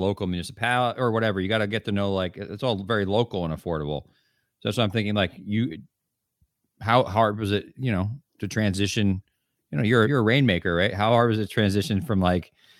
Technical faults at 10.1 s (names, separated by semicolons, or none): damaged data in a compressed stream